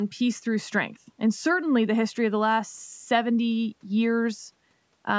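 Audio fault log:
Nothing stood out on listening to this speech, which comes through ordinary call microphone processing with no content above 8 kHz.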